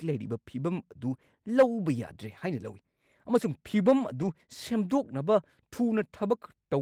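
At 1.13 to 1.15 s, 2.67 to 2.73 s and 4.21 to 4.27 s, there are lost packets rebuilt from error correction. There is no gap. The decoder played low-bitrate copies carried in the next packet, so each 20 or 40 ms stretch sounds briefly rougher and noisier.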